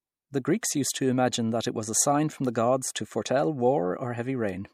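At 0.61 s, before "used to imagine that", pre-echo puts a brief hiss about 14 dB up ahead of the attack, not after it, which fits long transform blocks never switched short.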